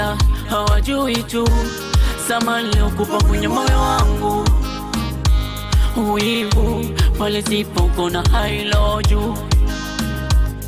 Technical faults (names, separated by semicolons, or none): none